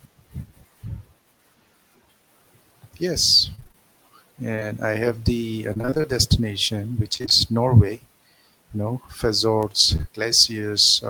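Around 3.55 to 3.76 s there's repeated packet loss, giving that robotic, choppy sound: roughly half the stretch is gaps of up to 25 ms, each patched by stretching the last bit of sound. Then at 4.56 and 4.59 s come two back-to-back short concealed packet losses, about 20 ms each filled in from what came before, heard as a quick smear. The robotic chop returns from 5.73 to 6.06 s and again from 7.14 to 7.32 s, with the same pattern of lost chunks about half concealed. At 9.63 s there's a single-sample bit error spike, a flipped bit making one sharp broadband tick unrelated to the sound. Finally, two more short concealed losses land at 9.96 and 10.01 s, a brief wobble where roughly 40 ms was patched over.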